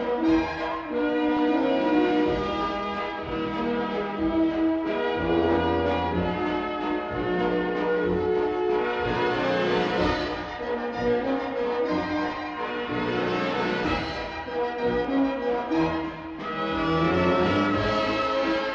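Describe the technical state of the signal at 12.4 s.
Just before 12.4 s, from 12.29 to 12.37 s, there is a short burst of DAB burbling. Bit errors slipped past the error correction and corrupted samples. Wrong samples put short blips of noise into single sub-bands. The result is a brief burst of noise blips, which fits a handful of damaged frames.

Underneath, the whole signal carries MP2 compression damage, likely from MPEG Layer II coding near 80 kbps. Too few bits switch off upper sub-bands and coarsely quantise the rest. It sounds dull, with a gurgling, granular edge.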